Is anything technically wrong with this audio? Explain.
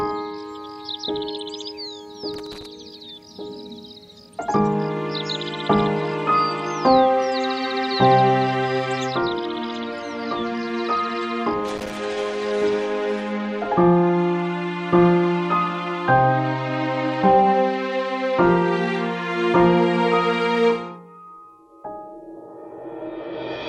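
Yes. Two irregular bursts of crackle and scratching break up the sound from 2.34 to 2.66 s and from 11.68 to 11.97 s. This is loose connector crackle: a worn or dirty contact rapidly makes and breaks, chopping the signal, and any DC on the line adds pops.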